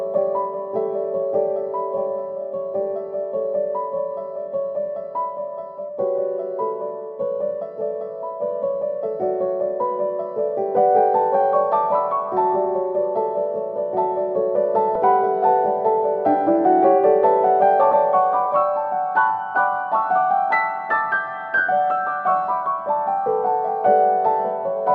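Compressed frames skipped at 14.95 s and 17.91–17.93 s: the audio jumps ahead about a tenth of a second, then around 70 ms, consistent with losing whole 20 ms frames.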